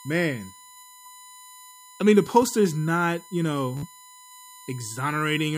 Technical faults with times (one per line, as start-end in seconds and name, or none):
0.00-5.57 USB whine
1.03-1.08 Bluetooth stutter
3.77-3.86 Bluetooth stutter